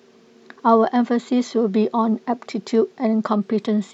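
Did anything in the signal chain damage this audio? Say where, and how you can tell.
Yes. It's the codec stage, over a Bluetooth link. From 3.30 s to the end of the speech at 3.94 s there's a Bluetooth SBC bit pool drop: the top end suddenly goes dull and a gritty grain rides on everything that's left. That fits the encoder backing off from a bit pool of 31 to about 11, roughly 83 kbps, to survive a congested link. The high sub-bands get starved of bits and the rest get quantised coarsely.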